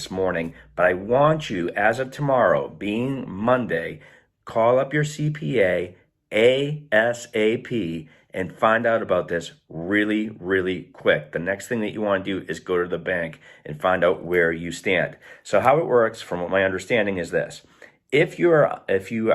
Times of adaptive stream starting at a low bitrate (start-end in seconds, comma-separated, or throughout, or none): 0.00-4.00